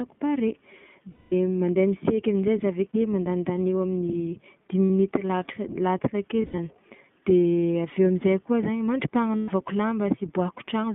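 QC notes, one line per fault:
Throughout: iLBC codec. The speech is squeezed into roughly 150 Hz to 3.5 kHz, nothing up top, with that slightly rough, synthetic edge you'd expect at 15.2 kbps.
1.13 to 1.33 s: lost iLBC frames, about 200 ms gone. The decoder keeps repeating the last pitch cycle mixed with noise, so you hear a held, buzzy vowel that fades before the speech snaps back.
2.91 to 2.94 s, 4.86 to 4.90 s, 9.36 to 9.50 s: lost iLBC frames, 40, 60 and 120 ms. They're the same held, breathy smear, and the voice comes back right away because each frame stands alone.
6.42 to 6.59 s: lost iLBC frames, 120 ms missing, scattered over about 160 ms. The longest gap is around 70 ms, so it comes across as choppy bits of buzzy fill between real speech.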